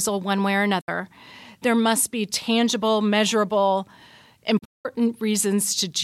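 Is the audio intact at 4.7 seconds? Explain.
No. The receiver hit a digital broadcast dropout from 4.58 to 4.86 s: incoming frames were lost or failed their checks, so it muted until clean frames returned. The sound fades out in about 8 ms and goes silent in short holes totalling 224 ms across a 256 ms stretch. The longest hole is 192 ms, and the pattern fits roughly seven lost frames. Whatever was said in that span is gone, not just quieter.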